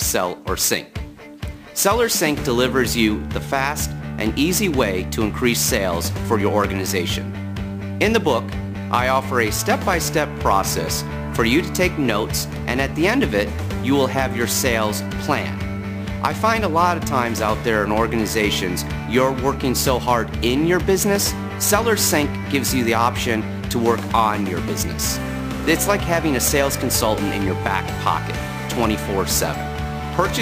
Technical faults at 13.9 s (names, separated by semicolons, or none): imaging from sample-and-hold upsampling